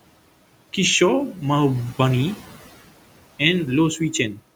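From start to finish the background noise pumps with the talking. It drops away in the pauses and swells back under each phrase. These are noise suppressor artifacts. The suppressor pulls down, frame by frame and band by band, whatever it treats as steady noise, here by about 18 dB. The room noise, about 18 dB below the speech, is switched in and out rather than held level.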